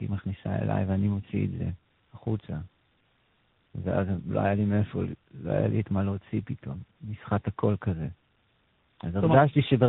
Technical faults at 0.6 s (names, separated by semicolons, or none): tandem speech coding